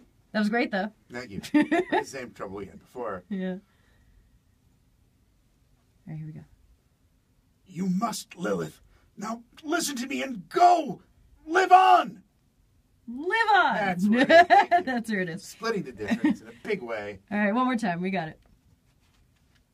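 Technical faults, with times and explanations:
No technical faults can be heard.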